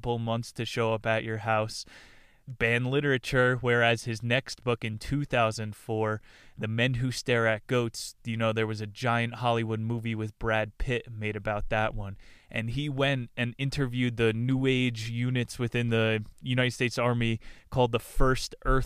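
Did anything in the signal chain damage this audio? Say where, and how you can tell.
No, nothing in the signal chain damaged this audio.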